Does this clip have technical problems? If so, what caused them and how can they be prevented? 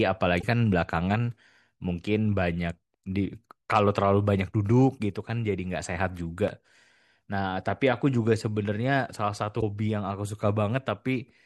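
Yes. Damaged data in a compressed stream made the decoder misread frames and lose sync, causing brief glitches at 0.38–0.44 s and 9.58–9.63 s. Protect storage and transmission with checksums and error-correcting delivery so corrupted frames never reach the decoder.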